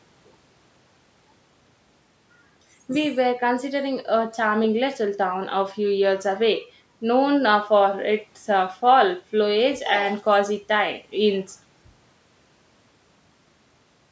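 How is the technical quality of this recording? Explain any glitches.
The technical quality holds up, with no glitches to explain.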